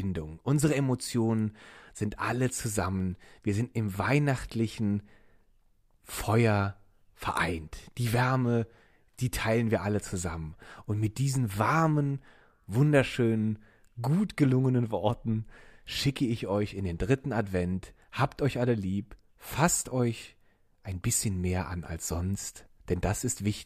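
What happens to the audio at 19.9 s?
Nothing goes wrong at 19.9 s; the speech runs on intact through that moment with no dropout, click or distortion.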